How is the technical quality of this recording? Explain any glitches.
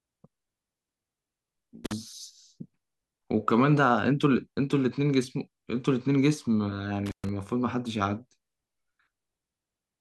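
The speech recording has two dropouts from an intermittent contact. At 1.85 to 1.93 s and again at 7.06 to 7.29 s, a loose cable or plug briefly opens the signal path, for about 46 ms and then about 127 ms. The sound cuts out with a crackle at each edge, leaving faint hiss while the line is open.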